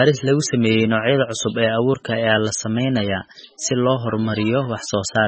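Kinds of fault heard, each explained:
MP3 compression: Heavy coding damage runs throughout this speech, likely from a very low bitrate. Nothing remains above 8.3 kHz. Weak frequency lines flicker frame to frame, sounding watery.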